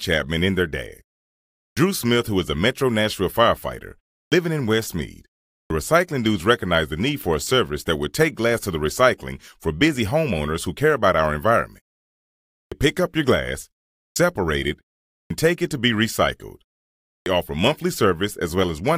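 The output device sleeps through each pause and needs roughly 80 ms to wake, a clipped start after a pause, at 1.69, 4.24, 5.63, 12.63, 14.08, 15.23 and 17.18 s. Each time, the speech lurches in abruptly out of silence with its opening sounds missing.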